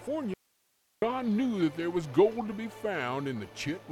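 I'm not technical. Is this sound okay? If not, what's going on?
No. There's an audio dropout to a faint residue from 0.34 to 1.02 seconds, about two-thirds of a second. The sound suddenly cuts out and leaves only a faint hiss, then just as suddenly comes back. It isn't a natural pause or fade. The likely cause is that the signal feeding the recording was briefly lost while the equipment after the break kept running, so it recorded its own background hiss.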